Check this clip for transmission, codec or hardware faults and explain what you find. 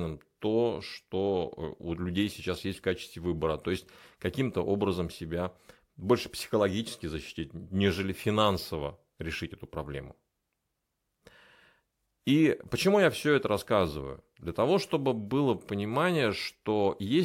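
Corrupt frame decoded, twice. The compressed stream had bits flipped and the decoder played the damaged frames anyway, so misread codes and wrong gains placed energy at the wrong frequencies. At 2.53 s, just after "у людей", a couple of frames produce a faint glitch peaking around -40 dBFS. From 6.17 to 6.21 s, just before "психологически защитить нежели финансово", a single frame gives a louder glitch near -25 dBFS, heard as a brief disturbance.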